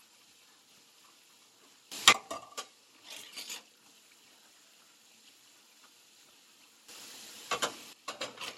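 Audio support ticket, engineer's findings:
Sudden gain jump at 1.92 to 2.13 s: sound and noise floor leap up together by about 20 dB, then drop back just as abruptly. Likely an unramped gain change or bit shift in the digital path, stepping level between adjacent samples.

Second sudden gain jump at 6.89 to 7.93 s: same hard step, about 12 dB this time, held for roughly a second. Background rises with the sound, so it's likely a gain stage, not the source.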